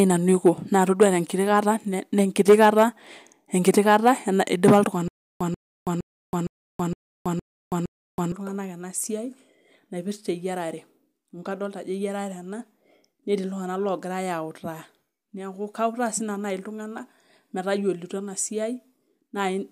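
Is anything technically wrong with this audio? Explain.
Yes. From 5.08 to 8.32 s the speech breaks into a stutter with silent gaps: a fragment of about 138 ms plays, then about 325 ms of dead digital silence, and the same fragment returns every 463 ms, seven times in all. The likely cause is a stalled player or stream that replays its last buffered fragment on each retry and then runs empty. Whatever should have played during those three seconds is missing.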